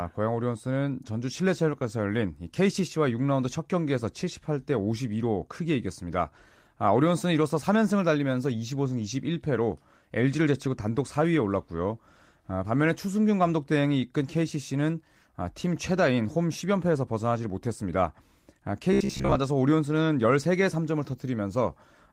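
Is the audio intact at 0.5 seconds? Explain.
Yes, at 0.5 seconds the audio is intact, with no dropout, click, distortion or other fault to be heard at that moment.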